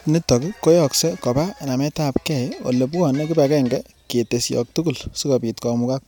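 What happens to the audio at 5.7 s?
Nothing goes wrong at 5.7 s; the audio is intact at that moment.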